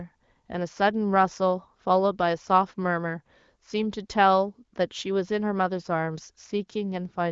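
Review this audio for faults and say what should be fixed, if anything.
No faults; nothing needs fixing.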